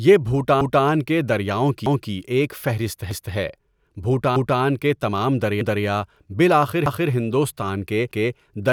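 At 0.61, 1.86, 3.11, 4.36, 5.61, 6.86 and 8.11 s, overlapping chunks replay a 250 ms stretch of speech. Each one-second chunk begins before the previous one ends, so the joins stutter every 1.25 s, repeating material rather than dropping it as a gap would.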